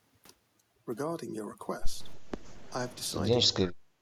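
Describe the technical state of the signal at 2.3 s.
At 2.3 s the speech is inside a stretch of speech suppressed in double talk, running from 2.16 to 2.45 s. The level falls sharply, by around 20 dB at its deepest, so the voice dips for roughly a third of a second. The likely cause is an echo canceller that could not tell the near talker from loudspeaker echo while both sides spoke, and attenuated everything together. Room noise sits about 15 dB below the speech.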